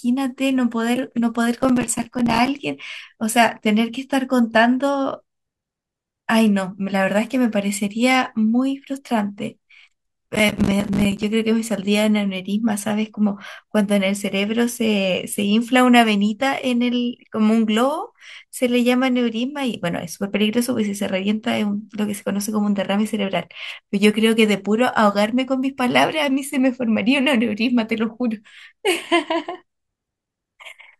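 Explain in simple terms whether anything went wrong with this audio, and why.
Processor overload crackle: the computer twice fell behind on its tiny audio chunks, dropping dozens into silence, so the speech crackles roughly from 1.6 to 2.6 s and 10.36 to 11.23 s.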